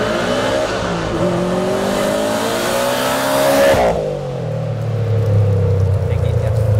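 Nothing goes wrong here at all, as the audio just runs along steadily from its first moment to its last without a single technical fault to point at.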